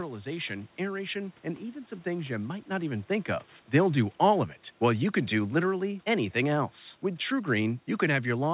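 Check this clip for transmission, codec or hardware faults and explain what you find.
One system fault stands out: automatic gain falling, from 3.77 s to 6.78 s. The gain control judged the input too loud or its background noise too strong, and pulled its gain down by about 4 dB over those three seconds. The speech therefore sinks steadily, and the room noise sinks with it, which separates this from the talker shifting position around 3 s. The whole clip stops at 4 kHz, which fits a narrowband G.711-style call codec.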